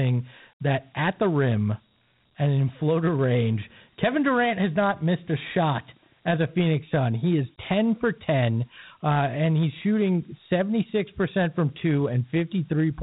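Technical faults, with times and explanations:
Throughout, Dialogic VOX ADPCM: the speech is band-limited, with nothing above about 3.9 kHz, which fits 8 kHz sampling. It carries a plainly audible gritty hiss, because each sample is coded as a coarse 4-bit step, which fits a 32 kbps stream.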